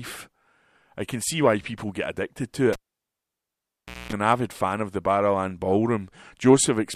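Right after "people get addicted to", at 2.73 s, there's a cable pulled and plugged in: a pop, then about 1.35 s of near silence, a 0.23 s burst of 60 Hz mains buzz as the plug tip touches first, and another pop at 4.13 s before "an avid fan of".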